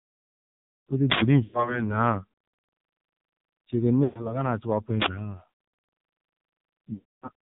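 Speech heard through the AMR narrowband mobile codec throughout, heavily damaged: the voice is buzzy and synthetic, which points to a low bitrate near 6 kbps. A spectrogram shows nothing above 4 kHz. Lost AMR speech frames occur at 1.44–1.84 s, 4.04–4.45 s and 6.94–7.30 s. At each one, the decoder repeats the last pitch and vocal tract settings with falling gain, so the sound stretches and fades before returning rough. The waveform shows a decaying envelope, and the spectrogram shows frozen, fading harmonic bands. The gaps point to roughly 100 ms, 120 ms and 280 ms of missing frames, and the last one fades fully to silence.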